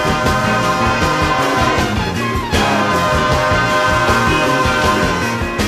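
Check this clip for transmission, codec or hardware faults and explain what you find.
Nothing wrong turned up here; it all sounds just as it should the whole way through.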